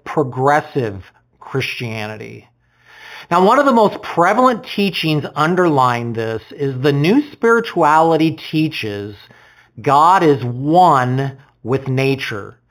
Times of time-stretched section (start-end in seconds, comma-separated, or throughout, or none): none